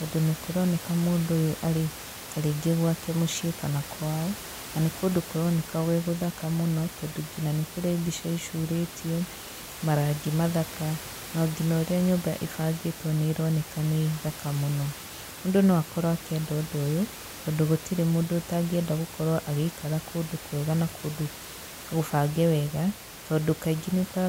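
Nothing stood out on listening to this speech, apart from the room's own background noise sitting about 14 dB below the voice, which belongs to the recording itself.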